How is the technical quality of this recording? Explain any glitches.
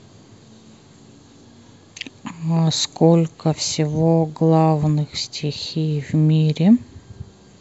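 Nothing in this speech recording stands out as a glitch, so there's really nothing here to explain.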